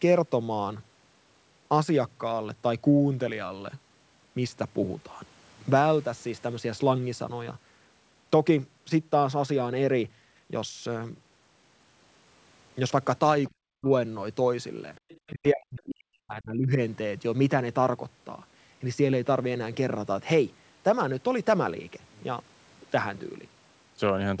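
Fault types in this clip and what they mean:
Speech suppressed in double talk: the talker's speech drops away sharply, by roughly 40 dB at its deepest, for about 0.3 s from 13.5 s and again for about 1.5 s from 15.31 s to 16.79 s. This is likely an echo canceller muting its own talker during overlapping speech.
Other side's voice leaking through: from 14.95 s to 15.31 s a second, faint voice sits underneath, roughly 30 dB below the main speech. This is likely residual loudspeaker echo that the echo canceller failed to remove from the microphone signal.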